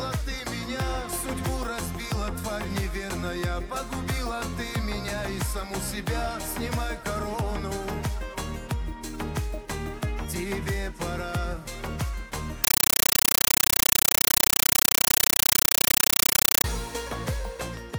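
At 12.64 s the audio suddenly gives way to harsh, very loud chattering static that runs until 16.64 s. It's a compressed stream played as audio: a Dolby Digital (AC-3) bitstream went out over the digital link and got treated as plain samples instead of being decoded. Each frame comes through as an 8 ms burst of noise followed by silent padding, 31.25 times a second, which gives that rapid buzz. The density fits a 384 kbps stream.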